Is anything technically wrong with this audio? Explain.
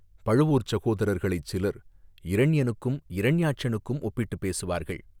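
Yes. From 0.51 to 2.39 s the speech slows by about 6.1% and drops about 108 cents, roughly a semitone, then snaps back. This is likely a drift correction step: clock-matching software changed the playback rate at once to manage its buffer.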